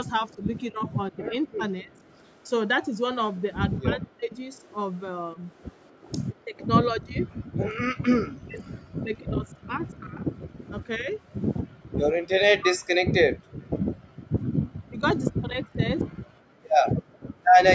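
From 0.33 to 1.94 s the speech dips and breaks up, losing roughly 0.7 s of sound in total and falling by about 35 dB at its deepest. The same happens far more heavily from 3.81 to 12.92 s, with around 4 s lost and drops of about 40 dB, and again from 14.85 to 15.87 s, with about half a second lost. This is likely speech suppressed in double talk: with both ends talking at once, the echo canceller could not tell the local talker from the loudspeaker echo and pulled both down. Unlike the gating below, the talker's own sound is what thins and fragments.

At 7.55 to 7.61 s the room background is gated by the echo canceller, a 70 ms hole about 37 dB deep. Longer gating follows from 11.63 to 14.33 s and from 16.15 to 17.39 s, each removing about a second of ambience at depths near 40 dB. Here the canceller clamped the microphone while the loudspeaker played, so the background itself vanishes and returns when it releases, rather than the speech breaking up.

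From 17.46 to 17.50 s a faint echo leak appears. It is a copy of the speech delayed by 249 ms, sitting about 40 dB below it, likely because residual loudspeaker pickup slipped past the canceller. Unlike the two suppression faults, which remove sound, this one adds a delayed repeat.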